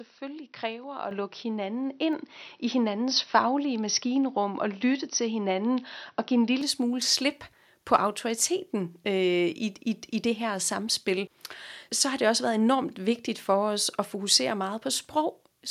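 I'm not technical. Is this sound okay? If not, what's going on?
No. From the start until 6.61 s there's a likely input switched to a poorer device: the sound is dull and muffled, then turns clear at once, with no gap, right before "smule slip".

At 1.11 s the microphone volume stepped up: the call software judged the microphone too quiet and raised its input in one go, so the voice and the background noise both jump noticeably louder together.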